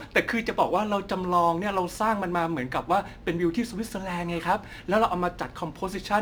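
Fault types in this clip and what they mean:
Crude rate conversion: samples dropped unfiltered, fitting 48 to 44.1 kHz, leave inharmonic fizz about 30 dB down, seen as stray spectrogram lines.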